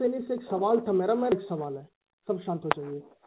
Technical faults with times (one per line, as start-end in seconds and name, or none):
1.32-1.34 skip ahead
1.42-2.94 jitter buffer speed-up